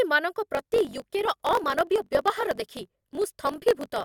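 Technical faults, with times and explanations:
0.53–4.04 s, block size mismatch (truncated): from 0.53 s to the end, a steady buzz of about 46.9 Hz rides under the speech, which runs about 1.12 times faster at roughly its normal pitch. One stage writes blocks longer than the next one reads, so each block's tail is discarded. The buzz rate fits a 1024-sample read. Unlike resampling, the pitch holds while the speech speeds up. Unlike a padded mismatch, it runs fast with no inserted gaps.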